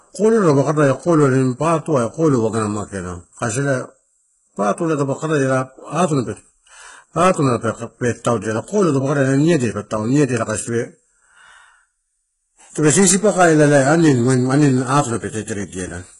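Right through the speech there's heavy codec damage that sounds like HE-AAC compression at a very low bitrate, likely around 12 kbps. The treble is rebuilt from copied lower bands, so s sounds come out gritty and lispy, and nothing reaches above 15.2 kHz.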